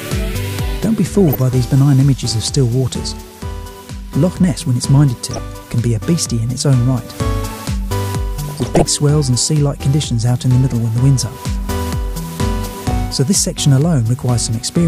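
DAB burbling occurs at 1.15 to 1.35 s, 5.31 to 5.38 s, 8.49 to 8.85 s and 12.59 to 12.91 s. Weak reception lets bit errors through. Single sub-bands blip with noise.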